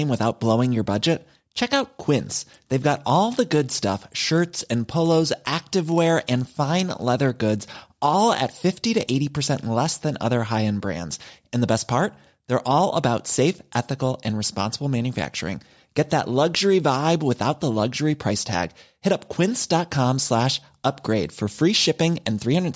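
A steady 50 Hz buzz rides on this speech clip from 0.9 to 8.32 s, just after "without blowing your", present only while sound plays. It comes from the resampler restarting on every block: each 20 ms block, likely converted from 44.1 kHz down to 16 kHz, was processed in isolation, leaving a small error at every block edge.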